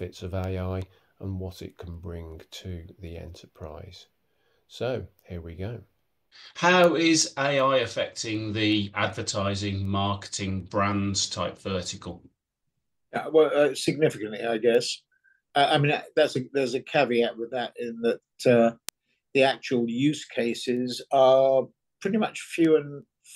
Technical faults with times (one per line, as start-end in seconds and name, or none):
0.44-23.02 word clock ticks